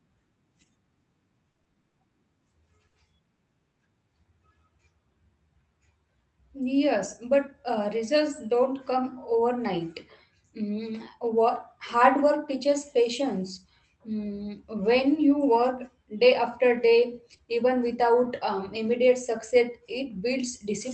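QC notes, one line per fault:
1.51–1.95 s, repeated packet loss (robotic sound). Six gaps hit this stretch, each up to 40 ms, 160 ms in all. The receiver kept extending the last sound to cover each one. About 36 percent of the span is filler, so it sounds choppy and robotic.
2.87–2.95 s, burst of packet loss. About 60 ms went missing in one run. The decoder carried the last sound forward and faded it, leaving a held buzz or fading hiss. Then the speech jumps ahead, and that piece is gone.
3.35–3.39 s, 3.71–3.75 s and 17.37–17.41 s, short concealed packet loss. Each time, about 20 ms never arrived. The decoder extended the previous sound and blended back into real audio. The result is a brief smear or wobble, and a short consonant may drop out.
16.77–16.87 s and 17.33 s, lost packet rebuilt from error correction. A lost 20 ms packet was replaced each time by a low-rate copy carried in the next packet. 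There is no gap, but those frames sound rougher and noisier. The first repair also adds about 13 ms. The call path's coding noise and its 8 kHz band limit fit an Opus stream at around 32 kbps.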